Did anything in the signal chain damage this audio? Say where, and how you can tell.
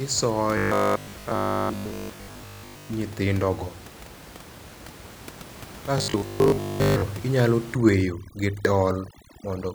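Yes. From 0.58 to 2.90 s, and again from 5.98 to 7.02 s, the speech collapses into a stiff 50 Hz buzz. That's robotic sound from repeated short buffers, likely a driver or buffer underrun looping a 20 ms chunk while most of the real audio gets skipped.

From 7.75 s to the end there's overdone noise removal in the call processing. The room noise, sitting about 18 dB under the speech, drops and breaks up into twinkly specks, and quieter parts of the speech get cut along with the noise.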